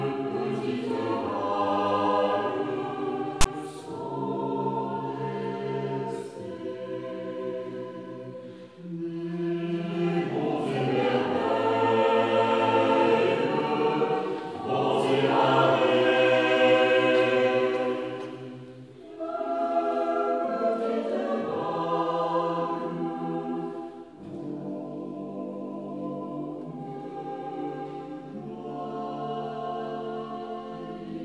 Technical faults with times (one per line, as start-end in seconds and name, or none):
3.41-3.46 file tags played as audio